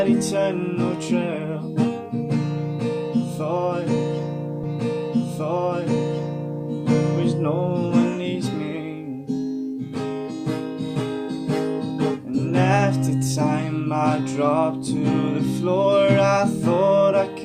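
A stream segment repeated from 4.63 s to 6.63 s: the player fetched or queued the same two-second chunk twice, so that stretch of audio plays again, adding 2 s to the running time, with a brief blip at the point where playback jumps back.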